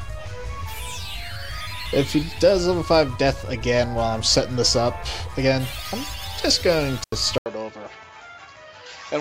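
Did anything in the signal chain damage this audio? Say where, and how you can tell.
Yes. In the analogue wiring, an intermittent contact opens the line between 6.98 and 7.18 s. The sound drops out for about 85 ms, with crackle at both edges and faint hiss in the gap, as a loose plug or cable breaks and remakes the circuit.

From 7.38 s to the end, after an 80 ms silence, the sound turns dull. Nothing remains above 7.6 kHz, the level falls roughly 5 dB, and a new noise floor sits around 30 dB down. The likely cause is an input switched to a poorer device at the driver stage.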